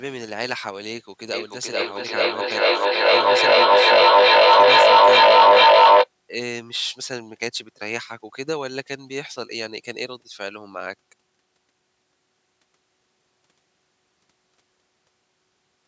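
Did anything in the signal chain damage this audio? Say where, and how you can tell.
Yes: feedback echo between two devices, from 1.33 to 6.11 s, damaged the audio at the call-processing stage. The sound returns roughly every 0.4 s and, instead of fading, the repeats build until they peak about 17 dB above the speech. Two devices in the same room are on one call. One plays the other's audio, that microphone picks it up again, and each device's echo canceller removes only its own playback, so the loop keeps feeding itself.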